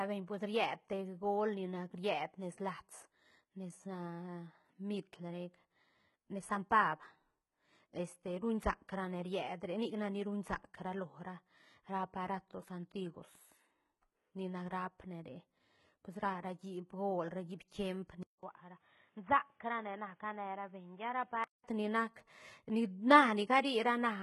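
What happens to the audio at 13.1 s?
Gritty, lispy s sounds and a metallic treble run through the whole clip, including 13.1 s. The likely cause is heavy HE-AAC compression. Only the lower spectrum is properly coded, and the top is rebuilt by copying lower bands upward, so harmonics don't line up. The damage points to a very low bitrate, around 16 kbps.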